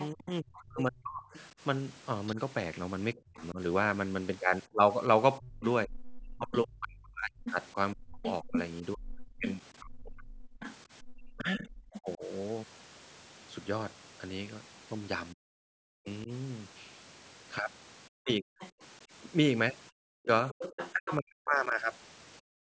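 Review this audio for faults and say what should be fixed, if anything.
A second voice runs underneath the speech from 0.0 to 11.99 s and again from 18.31 to 21.15 s. It sits roughly 10 dB below the talker. This is the other side's voice leaking through. The far end was most likely playing from a loudspeaker and reaching the microphone, and the echo canceller did not fully subtract it. To prevent it, use a headset or improve the canceller's echo path modelling and residual echo suppression.

The talker's own speech keeps sinking between 0.12 and 12.24 s, and again between 15.33 and 21.74 s. Dips reach about 35 dB in the first stretch and about 40 dB in the second. Together they cover roughly five seconds and one and a half seconds. This pattern is speech suppressed in double talk, likely caused by the canceller failing to tell near speech from echo while both sides spoke and then attenuating everything. 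To prevent it, use better double-talk detection so suppression backs off when the near talker is active.

The room sound drops out briefly twice. The first is a short dip of about 19 dB between 10.59 and 11.09 s, lasting only tens of milliseconds in total. The second is a deeper fall of about 40 dB from 22.41 s to the end, lasting around 300 ms. This is background gated by the echo canceller, which clamped the microphone hard while the loudspeaker was active. To prevent it, use gentler suppression with comfort noise so the background stays continuous. The missing content above 8 kHz comes from the call's normal microphone processing and is not a fault.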